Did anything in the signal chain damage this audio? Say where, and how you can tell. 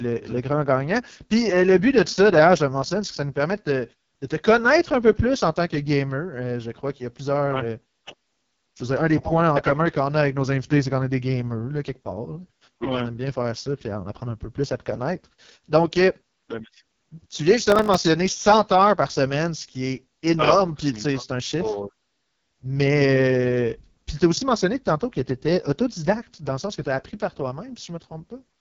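Yes. At the codec stage, AMR wideband (HD Voice) coding runs through the whole speech clip. The voice sounds rough and raspy, with the heavy coding damage that fits AMR-WB's lowest 6.6 kbit/s mode. A spectrogram shows nothing above 7.2 kHz. Below roughly 6.4 kHz the harmonics look smeared and pulse-like. The top band holds diffuse, unstructured noise instead of harmonic detail, because the codec fills it with shaped noise rather than coding it.

At the driver or buffer stage, processor overload crackle appears from 17.70 to 17.97 s, just after "tu viens". A gritty tearing rides on the audio for about a quarter second. The waveform shows around fifteen tiny hard-edged gaps of silence, each roughly 1.5 ms, which fits a very small buffer. When the processor missed those deadlines, each late buffer was replaced with silence. On a spectrogram the gaps appear as a cluster of thin vertical broadband streaks.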